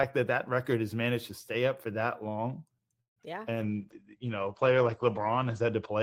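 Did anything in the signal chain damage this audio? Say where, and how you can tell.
Yes, the damage is all in the network and codec stages of a call, starting right after "up for that long".

From 3.01 to 3.18 s there's a call audio freeze. The last sound gets stretched into a short buzzy tail that quickly dies to near silence for about 130 ms, then the audio picks up exactly where it left off. Nothing's lost, just 150 ms of extra delay wedged in. That pattern most likely means packets got held up in transit and the jitter buffer ran dry while the receiver waited.

Right after, from 3.22 to 3.25 s, there's short concealed packet loss. About 20 ms of audio simply never made it to the decoder in time, and the receiver covered the hole by briefly extending what came before and blending back in, so you hear a quick smear or wobble rather than a clean dropout. The timing also tightens up a bit here, pulling back some of the delay the freeze added.

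From 3.48 s to the end, you're hearing a call bitrate drop. The encoder went from 32 kbps down to 11 kbps, sitting at the bottom for about 1.8 s, and the audio bandwidth collapsed from 20 kHz to 8 kHz. So everything goes duller and rough, with the top end sliced off. That's Opus reacting to a falling bandwidth estimate by coding far more coarsely.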